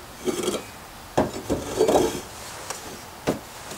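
From 2.71 s to 3.39 s the sound breaks into processor overload crackle, a gritty tearing laid over it for roughly two-thirds of a second. The processor falls behind and misses buffer deadlines again and again, on the order of twenty of them, each skipped outright, leaving short holes about 10 ms long. On a waveform this shows as a dense run of abrupt dropouts with hard edges; a spectrogram shows matching vertical broadband streaks.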